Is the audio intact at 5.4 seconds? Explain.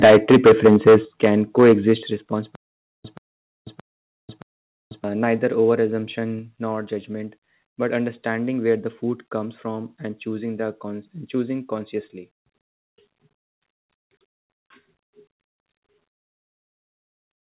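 No. At 5.37 s the speech and background drop abruptly by about 1 dB, a microphone volume stepped down, likely the call software lowering the input gain.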